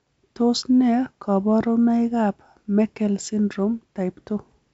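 Speech carried over G.722 wideband telephone coding at 56 kbit/s, with nothing above 7.7 kHz, and no technical faults to report.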